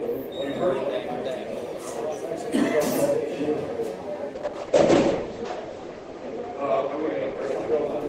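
From 4.36 s to the end, the sound turns duller and coarser. The top end vanishes above 8 kHz, where it had reached up to 20 kHz, and what remains takes on a rough, watery texture that bottoms out for about 1.87 s. This is a call bitrate drop: the bandwidth estimate fell and the encoder was starved of bits, consistent with a fall from roughly 32 kbps to 9 kbps. Opus responds by quantising coarsely and narrowing its coded bandwidth.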